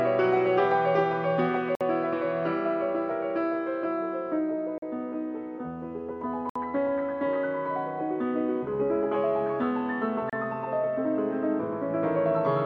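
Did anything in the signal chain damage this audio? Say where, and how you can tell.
Yes. There are four brief cuts to silence at 1.75–1.81 s, 4.78–4.82 s, 6.50–6.56 s and 10.30–10.33 s, lasting 31 to 60 ms, with the sound picking straight back up. That's likely a Bluetooth stall: delayed packets let the headphones' buffer run dry.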